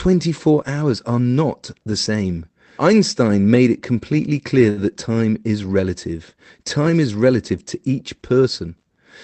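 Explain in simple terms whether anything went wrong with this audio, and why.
A short stall from a late packet happens at about 4.69 to 4.79 s. On a call, audio arrives in small packets, and one arrived late. The receiver's waiting area ran empty, so it stretched the last bit of sound for about 77 ms until the packet showed up, then carried on where it left off. Nothing is lost, but that moment of speech is held a little too long and may sound faintly buzzy.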